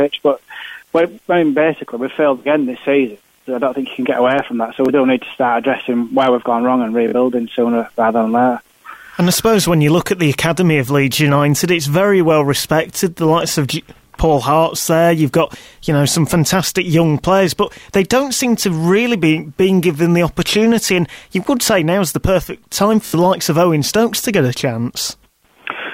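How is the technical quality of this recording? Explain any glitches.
Three brief glitches are audible, all Bluetooth stutter: at 4.86–4.89 s (about 23 ms lost), 7.08–7.14 s (about 46 ms) and 23.06–23.15 s (about 70 ms). Late or lost wireless packets made the receiver replay its last buffer, giving a short repeat. Unlike a plain dropout, it repeats rather than going silent, and the audio resumes slightly further on.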